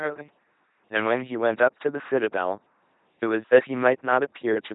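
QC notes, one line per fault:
Throughout, LPC-10 vocoder: heavy damage. The speech is rebuilt from a buzz or hiss through a simple vocal-tract filter, so it drones robotically rather than warbling like a starved waveform codec. Nothing sounds above 3.8 kHz, which fits a 2.4 kbit/s coder.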